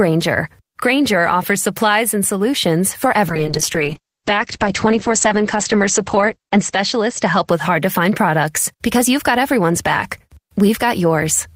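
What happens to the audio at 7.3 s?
A call bitrate drop is under way at 7.3 s, running from 3.29 s, just after "supplies and solutions for", to 7.77 s, just before "to find products". The encoder was starved of bits, and the sound points to a fall from around 32 kbps to about 9 kbps, held for roughly 3.15 s. With so few bits, coding turns coarse and the audio band narrows from 20 kHz to 8 kHz, so the speech sounds muffled, rough and watery until full quality returns.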